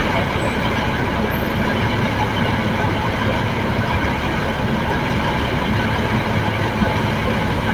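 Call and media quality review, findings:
No faults found; nothing to flag.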